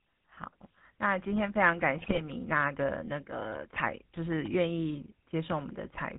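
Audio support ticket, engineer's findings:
GSM full-rate codec, full clip: plainly audible buzzy, gravelly roughness on the speech, band capped at 4 kHz, consistent with 13 kbps GSM full rate. The vocal-tract filter is driven by regularly spaced pulses from decimated excitation, so fine voice detail collapses into buzz.

GSM bit errors, 2.00–2.21 s: short burst of squawks, pops and gargling. Bit error rate about 4.25% across 9 frames. Flipped bits reach the speech decoder and corrupt the filter, pitch or gain parameters, so each hit frame decodes into distorted spectrum or level.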